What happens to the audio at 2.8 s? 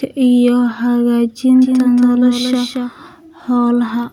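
At 2.8 s the speech is heard twice: a doubled audio track runs from 1.62 s to 2.90 s. A second full-band copy trails the original by around 200 ms, a few dB quieter, with no decay or room colour, so it sounds like a clean slapback rather than an echo. It is likely a second capture through a slower path mixed back in. The copy cuts in abruptly at 1.62 s and drops out just as abruptly at 2.90 s.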